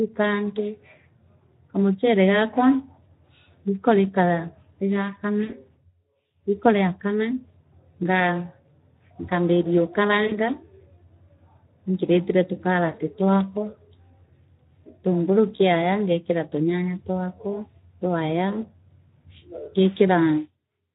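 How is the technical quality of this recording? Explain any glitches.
The technical quality is poor: the speech carries plainly audible low-bitrate codec damage throughout, and four short dropouts were patched over by the decoder.

Speex codec: Across the whole clip the speech sounds hoarse and noisy. That fits Speex at a low setting, around 11 kbps, where too few bits describe the excitation signal. On a spectrogram the harmonics look smeared and grainy, and any energy above 8 kHz appears as a diffuse, noise-like wash rather than crisp detail.

VoIP packet loss concealed by the speech codec: Short gaps occur at 5.43–5.55 s, 10.27–10.38 s, 12.95–13.00 s and 15.55–15.61 s, the last just before "ngeekira tunyanya". They point to losses of roughly 60, 40, 20 and 40 ms of audio. In each gap the decoder repeated its last pitch and spectral shape at falling gain, so the sound is briefly stretched into a fading tone or noise. 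On a spectrogram this shows as flat, frozen harmonic bands. In the waveform it appears as a decaying, overly regular stretch, with the signal staying weak for a few tens of milliseconds afterwards.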